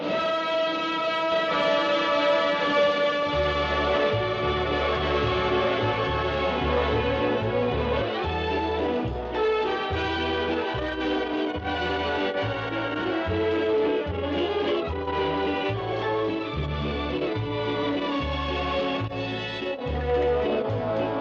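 A doubled audio track runs from 1.32 s to 8.02 s. A second, full-band copy of the sound trails the original by about one second, at roughly the same loudness, so everything is heard twice, one second apart. The copy carries no decay or room colour, and it cuts in and out abruptly at both ends. The likely cause is the same signal being captured again through a slower path, or an edit leaving two copies out of step.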